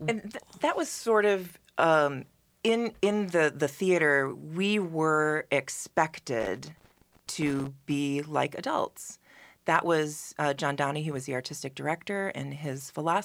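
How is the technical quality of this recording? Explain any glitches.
One glitch stands out. From 6.40 to 7.67 s, just before "be like adults that", loose connector crackle appears. A worn contact makes and breaks, chopping the speech into irregular scratchy bursts. On a spectrogram these show as scattered broadband vertical streaks, and on a waveform as ragged gaps and spikes.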